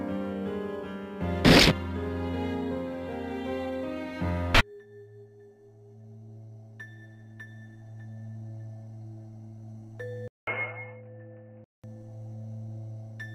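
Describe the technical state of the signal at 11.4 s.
At 11.4 s the sound is dull and boxy, with nothing above 3 kHz, likely from the input switched to a poorer device between 10.28 and 11.84 s. The spectrogram shows a flat ceiling at 3 kHz; the waveform shows a 195 ms gap, then a level about 5 dB lower over a new noise floor.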